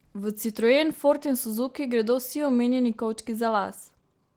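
From start to finish the speech has a hoarse, slightly robotic grain that is plainly audible, though the top end still reaches about 20.4 kHz. This is Opus voice compression running in hybrid mode. The lower band is coded by the SILK linear-prediction layer, whose coarsely quantised excitation roughens the voice, while a thin CELT layer covers the fullband top. The damage level points to a bitrate around 16 kbps.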